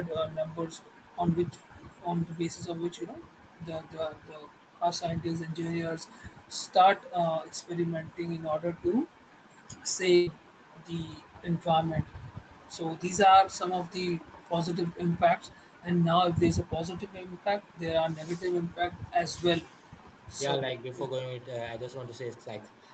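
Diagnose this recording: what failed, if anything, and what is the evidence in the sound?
A burst of packet loss on the network leg of the call, at 10.15 to 10.30 s. The speech there is replaced by about 113 ms of concealment: the last sound stretched into a held, fading buzz or hiss. Speech then resumes roughly 120 ms further on, with that stretch missing. The top end stopping at 8 kHz fits a wideband Opus call.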